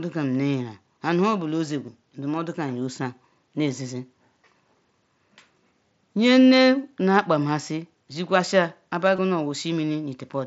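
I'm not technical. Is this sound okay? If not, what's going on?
No. There is concealed Bluetooth headset packet loss: twice, bits of the signal travelling from the headset to the phone went missing, and the phone covered each gap by repeating a sliver of what came just before. You hear a tiny buzzy blip at 1.86 s and again from 9.16 to 9.19 s.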